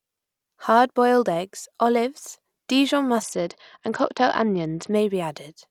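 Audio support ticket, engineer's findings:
Speech dulls and turns gritty, 3.22 to 4.92 s: treble dulled, coarse grain on the remainder. Bluetooth SBC bit pool drop on a congested link: top sub-bands starved, others coarsely quantised. Fits bit pool 31 falling to 8, near 66 kbps.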